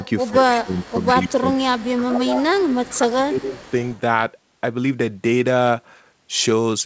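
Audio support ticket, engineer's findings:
Echo leak at 0.00–0.39, 0.78–1.32, 1.75–2.88 and 3.53–4.00 s. Delayed copy of the speech, 132 ms behind. Level falls from about 15 dB below the speech, to about 20, then about 25. Likely cause: the far-end echo canceller missing part of its loudspeaker pickup.

Speech suppressed in double talk at 0.31–0.77, 1.12–2.47 and 2.83–3.57 s. Near-talker level dips in pieces while the echo overlaps, by about 15 dB at first and about 20 dB in the last stretch. Likely cause: the canceller failing to separate the talker from the echo, so it attenuates both. Band ends near 8 kHz, which fits a G.722 call path.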